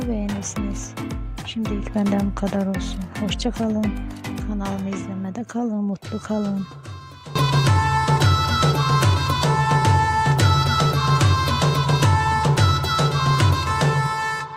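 Nothing goes wrong anywhere in this audio, so there's no technical fault to point out.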